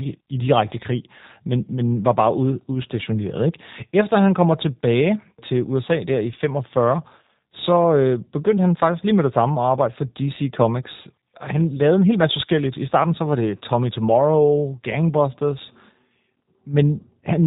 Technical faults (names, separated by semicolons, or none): G.729 codec